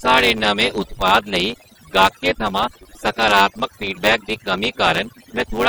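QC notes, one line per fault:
throughout, overdone noise removal: the background drops and breaks up into twinkling specks. Noise reduction set far too strong cuts individual frequency bands down or out whenever they sit near its noise estimate, and quieter parts of the speech vanish with them.
throughout, block size mismatch (truncated): a steady 100 Hz buzz runs under the speech, which plays 1.09 times fast at about its normal pitch. One stage writes longer blocks than the next reads, so the tail of each block is discarded every 10 ms.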